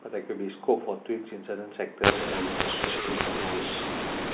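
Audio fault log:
2.04 to 4.34 s, mu-law and A-law mixed up: the speech is coded as A-law, and from here to the end it's decoded as if it were mu-law. The two logarithmic curves don't line up, so the levels get scrambled, some peaks come out too loud and others too soft. The quietest samples are pushed well above silence, which is why the speech turns harsh and gritty and the gaps fill with a noisy hiss, while the band stays capped under 4 kHz by the telephone coding.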